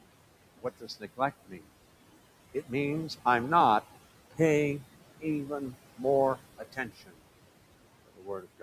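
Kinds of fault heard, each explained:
Noise suppressor artifacts: frame-by-frame attenuation of bands judged to be steady noise lowers the room noise by about 17 dB between phrases.
Speech cut by the noise suppressor: quiet speech is mistaken for noise and dropped by up to about 19 dB, such as just after "means I'm not paying", leaving it faint.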